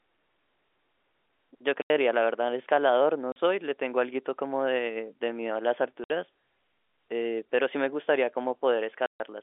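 At 1.82 to 1.90 s, 3.32 to 3.36 s, 6.04 to 6.10 s and 9.06 to 9.20 s the speech drops out completely. This is packet loss filled with silence. Audio failed to arrive and the receiver played dead air instead. The gaps last 80, 40, 60 and 140 ms, all multiples of 20 ms, which fits 20 ms packets. A waveform shows flat silent stretches with sharp vertical edges, and a spectrogram shows blank columns cutting across the narrow telephone band.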